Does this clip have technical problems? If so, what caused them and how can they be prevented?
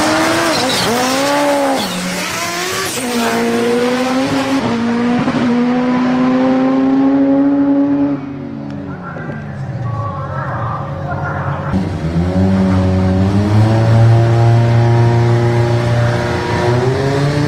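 Yes. From 6.22 to 7.98 s a jitter buffer speed-up cuts short pitch-period pieces, about half a second in total, so the audio runs at 130% speed without changing pitch. To prevent it, smooth network delay with steadier routing or QoS, and set the jitter buffer to drain gradually rather than in one burst.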